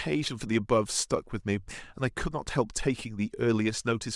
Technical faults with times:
none

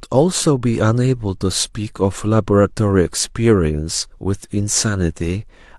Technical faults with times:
none

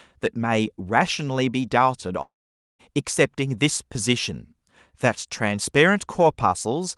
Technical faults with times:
2.21-2.81 long network dropout

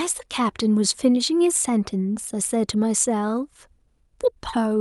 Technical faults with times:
0.00-4.80 clock drift between sender and receiver
0.26-4.62 repeated timing corrections

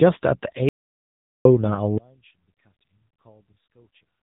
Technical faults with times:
0.00-4.23 AMR narrowband mobile codec
0.69-1.45 audio dropout to silence
1.98-4.23 one channel inverted

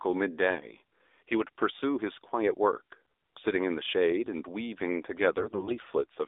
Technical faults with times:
0.00-6.28 AMR narrowband mobile codec
5.38-5.80 AMR bit errors

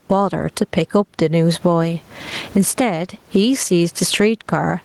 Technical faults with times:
0.00-4.84 gain pumping

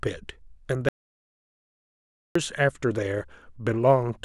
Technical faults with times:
0.89-2.35 audio dropout to silence

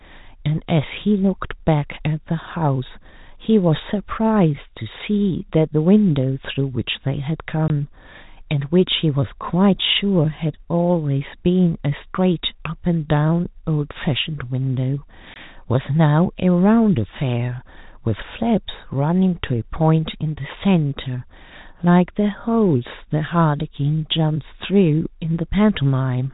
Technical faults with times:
7.68-7.70 packet loss filled with silence
15.34 packet loss filled with silence

